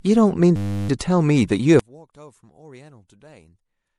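From 0.56 to 0.89 s the speech locks into a system hang loop: a 10 ms slice repeats for about a third of a second, which comes across as a steady 100 Hz buzz while the driver sits frozen.

Throughout, there's plainly audible damage from what's likely MP3 compression at a low bitrate, around 64 kbps by the sound of it. There's watery swirl on the sibilants.

From 1.79 s to the end the level drops by about 28 dB. That points to one channel inverted, with the centred voice cancelling in mono and leaving only a faint residue.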